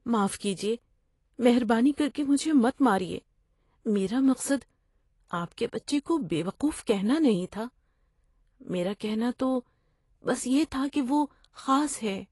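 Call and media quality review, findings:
AAC compression, whole clip: speech dull and smeared, sibilants fizzy, plainly audible codec damage. Spectrogram shows a lowered cut-off with nothing above. Likely AAC-LC encoder quantising coarsely at a rate consistent with roughly 32 kbps.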